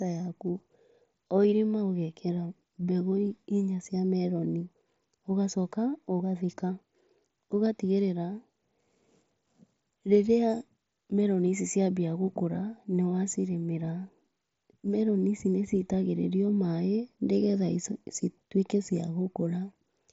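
Dropped samples at 3.08 s produce a single sharp click in this speech. The waveform appears to jump straight from one value to a later one, which most likely means a sample or so went missing from the stream. The gap is far too brief to take out any audible sound, so all that remains is the click, a thin vertical line across the spectrum that stops at about 8 kHz, where the mSBC headset codec's band ends.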